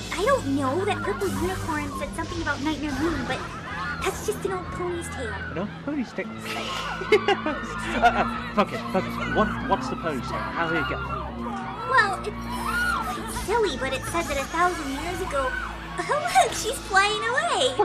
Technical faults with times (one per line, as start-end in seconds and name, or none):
none